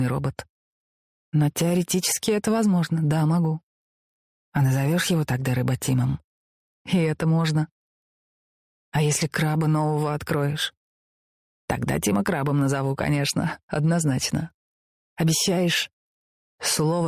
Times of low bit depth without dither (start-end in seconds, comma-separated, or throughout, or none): none